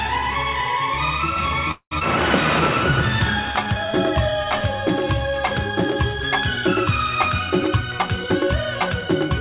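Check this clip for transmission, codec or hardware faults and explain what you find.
Four faults are present: a stall with concealment, a forward jump, and two stretches where the playback rate departs from real time. Everything is band-limited at 4 kHz, which fits the G.711 A-law narrowband path at 64 kbps.

Call audio freeze, 1.71 to 1.93 s. Packets were likely held up in transit, and the jitter buffer ran dry. The receiver extended the last sound for about 0.2 s as a fading buzz or hiss, ending in roughly 80 ms of silence. When delivery resumed, playback picked up exactly where it had stopped. Nothing was lost, but the gap added about 0.2 s of delay to everything after it.

Skip ahead at 2.0 s, 1.99 to 2.03 s. Shortly after the stall, about 150 ms of audio was discarded, in transit or by the jitter buffer overflowing, while later material was already queued. There is only a brief 17 ms join, so the sound on either side of the cut is spliced almost directly. 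The result is an abrupt jump forward rather than a pause.

Jitter buffer slow-down, 3.43 to 5.51 s. The buffer was running low or had just raised its target delay, so the receiver repeated individual pitch periods and short pieces of pauses over and over to build a reserve. This added 133 ms across the span and ran playback at about 94% speed. Pitch stays unchanged, but sounds are slightly drawn out.

Jitter buffer speed-up, 7.62 s to the end. Here the buffer held more audio than its target, so the receiver cut short segments of one or a few pitch periods in quick succession. Roughly 0.2 s was removed, running playback at about 111% speed. Pitch holds steady, but the final stretch sounds noticeably hurried.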